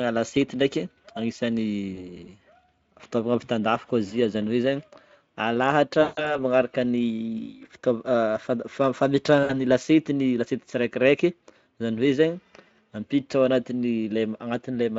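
VoIP packet loss concealed by the speech codec occurs four times: at 1.95 to 2.11 s, 6.01 to 6.42 s, 7.82 to 7.85 s and 9.43 to 9.55 s. Each time, packets failed to arrive and the Speex decoder filled the gap by extending its last pitch and filter while lowering the gain. The gaps sound like about 20 ms, 160 ms, 20 ms and 60 ms of missing audio. The longest, near 6.0 s, smears into a fading buzzy tone or coloured noise, and each dropout leaves the sound weakened briefly after it.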